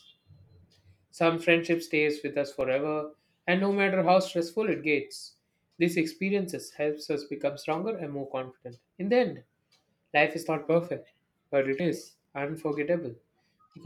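A speech clip with a block of digital silence at 2.61 s: the output buffer seems not to have been filled in time, so about 2.7 ms of samples, which fits a 128-sample block, were replaced by zeros. The abrupt cut and return leave a brief tick or dip.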